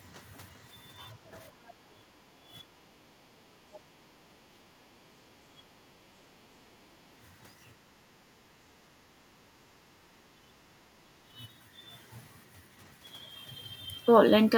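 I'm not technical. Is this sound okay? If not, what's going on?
No. The call's echo canceller, the part that keeps the other person's voice from bouncing back to them, is cutting into this recording in three ways.

Background gated by the echo canceller: from 1.17 to 4.21 s, 6.4 to 6.83 s, 7.84 to 9.87 s and 11.01 to 11.37 s, the quiet room sound behind the talker sinks and then comes back. The canceller is turning the microphone down while the other side's voice plays from the loudspeaker. Unlike the next fault, the talker's own voice isn't what disappears. The hush is in the background.

Speech suppressed in double talk: at 1.99 to 2.37 s, 4.49 to 5.11 s and 10.35 to 10.41 s, the talker's voice itself briefly dips or drops away in short pieces, most deeply around 4.5 to 5.1 s. The likely cause is both people speaking at once, so the canceller couldn't tell the talker from the echo and turned everything down. 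This is different from the background gating because the voice goes missing, not just the room behind it.

Other side's voice leaking through: from 3.73 to 3.78 s, a very faint scrap of a second voice slips in, far quieter than the talker. This is likely the other person's voice coming out of the loudspeaker and not being fully removed from the microphone. It is the reverse of the other two faults. Instead of something missing, an extra sound gets through that shouldn't be there.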